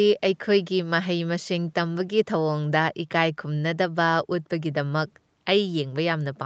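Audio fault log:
No faults heard in this speech clip.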